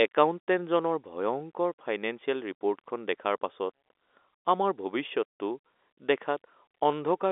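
No faults to report: the speech sits in a normal telephone band of roughly 300 Hz to 3.6 kHz with nothing above 3.8 kHz, which fits G.711 telephone coding at 64 kbps, and any trace of the codec's own noise is faint at most.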